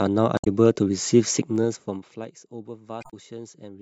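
Speech clip. At 0.35 to 0.47 s and again at 3.00 to 3.14 s, damaged data in the compressed stream makes the decoder lose sync, giving a brief glitch. From 1.39 to 2.33 s the level falls by about 20 dB in 2 dB steps, roughly ten per second. This is zipper noise. Each unsmoothed step clicks, so a ticking rides on the voice as it drops.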